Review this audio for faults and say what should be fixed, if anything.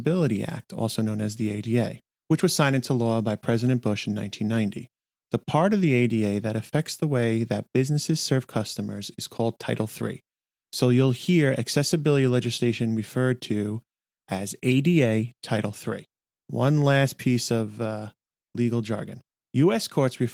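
Nothing in this audio needs to be fixed, as no faults can be heard.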